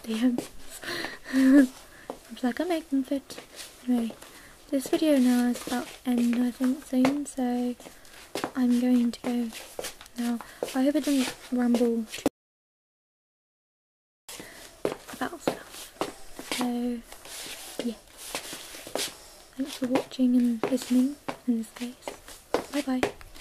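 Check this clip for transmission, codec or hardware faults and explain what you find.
There is one fault, a single gap in the audio. From 12.28 to 14.29 s the sound cuts to dead silence with no room tone, then resumes. This is an audio dropout to silence, likely from the input being lost while recording carried on.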